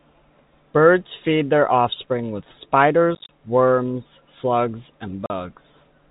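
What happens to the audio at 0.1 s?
At 0.1 s the speech carries on intact, with nothing wrong at that moment beyond the narrow telephone band of its G.711 coding.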